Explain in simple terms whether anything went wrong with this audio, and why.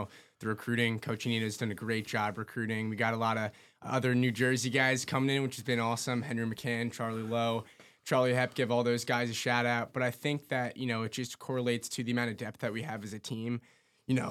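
Nothing went wrong here: there's no audible fault anywhere in the recording.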